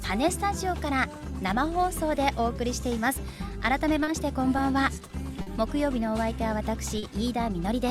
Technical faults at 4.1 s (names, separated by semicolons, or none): short stall from a late packet